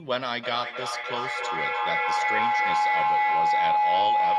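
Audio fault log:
0.43 s to the end: feedback howl. Sound from a second device in the same room is picked up again by the microphone and played back louder on each trip round the loop, so the repeats, roughly 0.3 s apart, grow instead of dying away and narrow onto a tone around 1 kHz. It peaks about 7 dB above the speech. A spectrogram shows a bright horizontal band near 1 kHz, and the waveform swells into a dense, rising envelope.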